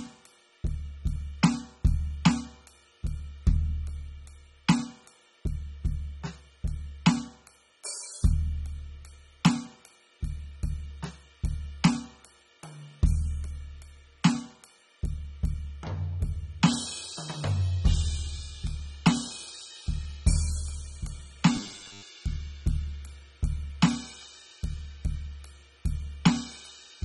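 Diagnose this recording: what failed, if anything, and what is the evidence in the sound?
AAC compression runs through the whole music recording, likely at the codec stage: the codec damage is plainly audible. The dull, smeared texture fits AAC-LC at a low bitrate, around 24 kbps.

Robotic sound from repeated short buffers appears from 21.57 to 22.04 s, likely in the driver or buffer stage. A rigid 100 Hz buzz follows the music only roughly as a 10 ms chunk is replayed, with about half the audio repeated instead of new.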